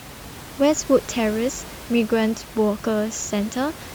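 The speech signal shows no technical faults, with only the room's own background sitting about 17 dB beneath the speech as part of the recording.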